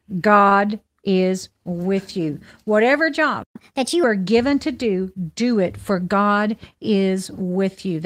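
At 0.49 s, just before "is with you", the speech holds on for an extra 20 ms with a faint buzz or dip, a short stall from a late packet while the jitter buffer ran dry.

From 3.43 to 3.56 s the sound drops out for 120 ms, a playback stall, likely because the player ran out of data.

From 3.56 to 4.04 s, leading into "are given to do", speech runs 1.25 times fast and about four semitones high. This is catch-up at higher speed, replaying the backlog.

After "to do do it", from 5.94 to 6.21 s, speech sounds hurried but keeps its pitch at 111% speed. This is a jitter buffer speed-up trimming around 40 ms of pitch periods.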